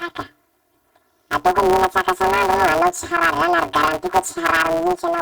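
Speech, with planar audio read as interleaved for the whole clip: short blocks of about 5.8 ms, which fits a 256-sample block, each replay as squeezed left-then-right halves. This gives a robotic buzz at 172 Hz with no clear octave shift, visible as harmonic lines spaced 172 Hz apart on a spectrogram and a waveform with a seam every 5.8 ms.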